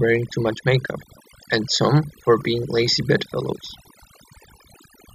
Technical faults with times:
0.00-5.14 overdone noise removal

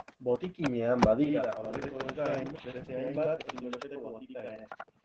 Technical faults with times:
0.00-5.05 Opus voice compression
1.24-5.05 channel delay (doubling)

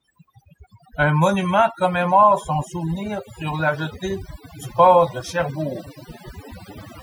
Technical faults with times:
0.00-7.02 overdone noise removal

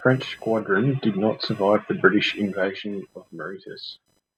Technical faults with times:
0.00-4.37 computer activity noise

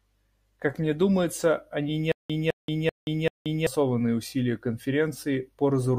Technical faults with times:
2.12-3.67 stutter with silent gaps

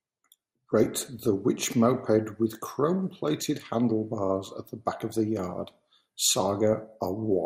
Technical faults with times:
0.00-7.45 MP2 compression
0.84-0.86 DAB burbling
3.03-3.10 DAB burbling
6.73-6.81 DAB burbling

